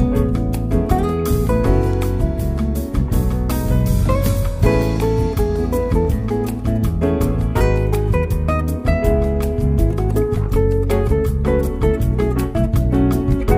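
A single sharp tick at 1.93 s, peaking at about -20 dBFS, is a bit error spike: a flipped bit briefly jolted a few consecutive sample values.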